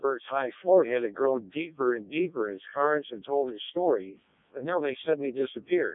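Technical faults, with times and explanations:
Throughout, Codec 2 vocoder: the speech sounds robotic and buzzy because it's rebuilt from sine waves using only pitch, voicing, energy and a rough spectral envelope, so the real waveform is lost. The damage is heavy, which fits the 0.7 kbit/s mode, and nothing comes through above 3.6 kHz.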